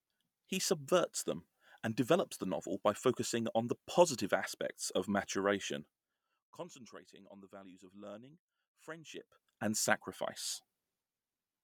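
From 9.05 to 9.43 s a ticking rides on the speech. This is zipper noise: a roughly 20 dB level change arrives in unsmoothed 2 dB steps.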